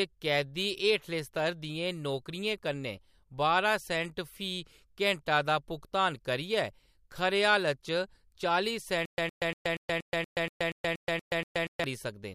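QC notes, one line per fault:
9.05–11.84 s stutter with silent gaps: a 112 ms burst recurs every 238 ms, 11 times, with 126 ms silences; likely a stalled player replaying its last fragment.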